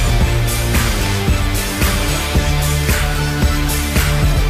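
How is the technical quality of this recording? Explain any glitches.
No glitches or technical faults are audible anywhere in the recording.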